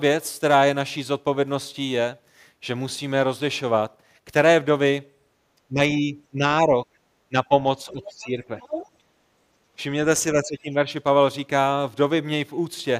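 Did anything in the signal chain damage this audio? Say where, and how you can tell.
Yes, and it's in the call processing. The talker ducks by about 10 dB in short stretches at 5.69–5.79, 6.0–6.74, 7.3–7.51, 7.84–8.51 and 10.4–10.87 s. That's likely speech suppressed in double talk: the echo canceller couldn't separate the near talker from loudspeaker echo, so it pulled both down.

Same stage, second problem: a fainter voice slips in at 8.04–8.26 s, roughly 20 dB under the talker, then at 8.59–8.89 s, only about 10 dB under. Likely the other side's voice leaking through. The far end played over the loudspeaker and the canceller left residue in the mic feed.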